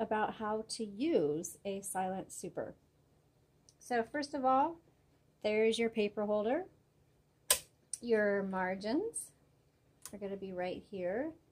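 No technical fault can be heard anywhere in the audio, and the signal stays steady and intact throughout.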